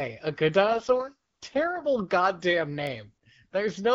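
From 0.64 s to 1.82 s, just after "a good", there is an AMR rate drop. The codec switches to a much lower bitrate for about 1.2 seconds and spends the freed bits on error protection for a weak radio link. The bandwidth stays the same and nothing cuts out, but the speech turns rough, raspy and synthetic. That texture fits a fall from the 12.65 kbit/s AMR-WB mode, which sounds clear elsewhere in the clip, to the 6.6 kbit/s mode, before the rate recovers.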